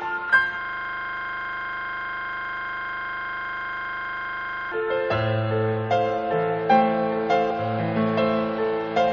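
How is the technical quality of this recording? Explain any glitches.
The recording has two kinds of serious glitch: brief jumps where compressed audio is missing, and a long frozen stretch near the start.

Compressed frames skipped, at 0.29 s and again at 7.5 s. Whole blocks of encoded audio never reach the output. They were either lost from the file or rejected by the decoder as damaged. The first gap drops about three frames, roughly 70 ms. The second drops about four, roughly 100 ms. Frames here last 26.1 ms. Overlap between neighbouring frames softens each join into a short smeared blip, not a sharp click.

System hang loop, from 0.61 s to 4.72 s. The computer or its driver stalled, but the sound hardware kept replaying its ring buffer. A single 40 ms slice of audio repeats exactly, 103 times. At 25 Hz the repetition sits between a buzz and a stutter. It sounds like a rapid, rough, mechanical drone. 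It lasts about four seconds before normal playback resumes.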